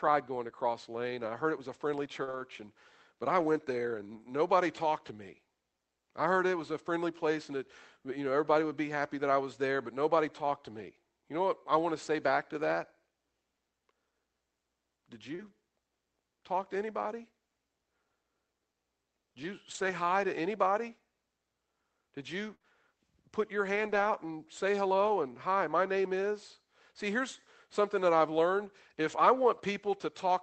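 Speech carried over a call link whose Opus-style coding leaves audio topping out near 8 kHz, with three kinds of packet-loss damage. Short concealed packet loss appears at 2.23–2.29 s just after "it was a friendly", 15.35–15.41 s and 22.62–22.66 s. Each is a brief smear or wobble where about 20–40 ms went missing and was papered over by extending the preceding sound. It is shorter than the burst. Lost packets rebuilt from error correction follow at 2.27–2.41 s, 15.39–15.49 s, 19.71–19.93 s, and 23.76–24.06 s between "put your" and "and say". These stretches of 60–160 ms sound rougher and noisier but stay continuous, because low-bitrate backup copies filled the gaps. The longest spans fit several separate packets. A burst of packet loss at 22.55–22.62 s drops about 60 ms outright. The last sound is held as a fading buzz or hiss before the speech resumes further on, so unlike the rebuilt sections, material is actually skipped.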